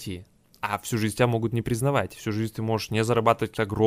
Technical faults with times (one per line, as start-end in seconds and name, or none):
3.56 compressed frames skipped